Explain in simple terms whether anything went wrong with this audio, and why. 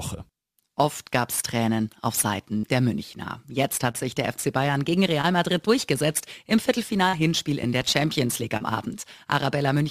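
Several things went wrong, all in how the sound was carried or picked up.

Burst of packet loss: at 2.57 to 2.65 s, a cluster of data packets was lost or arrived too late. The receiver stretched the last bit of sound and faded it for about 56 ms, so you hear a brief held buzz or hiss, then about 60 ms of audio is skipped.

Short concealed packet loss: smaller gaps occur at 3.91, 5.21, 7.09 and 8.57 s, each missing 20 to 40 ms. The receiver patched each hole by continuing the preceding sound, leaving a quick smear or wobble where a tiny piece may vanish.

Loud pop: between 7.63 and 7.84 s, a sudden electrical jolt, likely from a plug, switch, static or driver glitch, added two sharp pops that jump out above the surrounding sound while the audio keeps going underneath.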